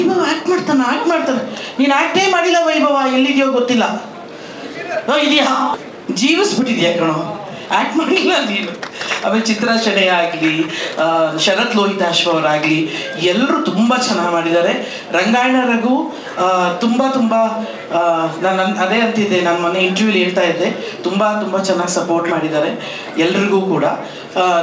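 At 5.74 s the audio jumps abruptly forward with no gap, and roughly 0.7 s of sound is simply missing, its two sides butted together. This is a skip ahead: a stretch of audio was dropped, either on the way or by the jitter buffer when it overflowed, while later audio was already waiting. Right after it, from 5.83 to 6.63 s and from 7.04 to 7.98 s, the sound runs about 6% fast at unchanged pitch, then about 8% fast from 8.73 to 11.22 s, giving a hurried feel. This is jitter buffer speed-up: with too much audio held, the receiver trimmed short pitch-period-length pieces over and over, roughly a few hundredths of a second in the first two passages and about a fifth of a second in the last. The call path's band limit, with nothing above 8 kHz, fits G.722 at 64 kbps.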